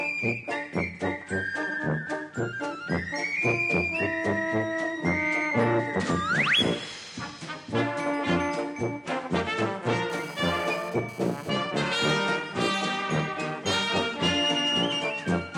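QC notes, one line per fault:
10.1–11.50 s GSM phone buzz: a hard, raspy 217 Hz rasp with stacked harmonics, about 21 dB below the sound, from a nearby phone's data bursts getting rectified.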